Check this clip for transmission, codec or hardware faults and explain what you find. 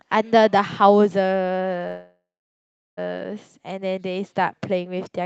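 One fault is present in this speech: a call audio freeze from 1.87 to 2.99 s. Packets were likely held up in transit, and the jitter buffer ran dry. The receiver stretched the last sound into a fading buzz or hiss that falls to silence for roughly the final 0.75 s. Speech then resumes where it stopped, about 1.1 s late, with nothing lost. The call codec's bandwidth is roughly 8 kHz throughout.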